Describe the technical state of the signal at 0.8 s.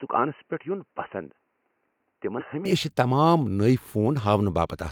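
At 0.8 s the speech comes through a narrower, duller channel, most likely because the input switched to a poorer device. That state holds from the start to 2.65 s, and the fuller sound returns there with no gap. In this stretch nothing above 3 kHz gets through, so the audio sounds boxy. A spectrogram shows a hard ceiling at 3 kHz with a faint new noise floor, about 45 dB down. In the waveform, the envelope sits roughly 5 dB lower until the switch.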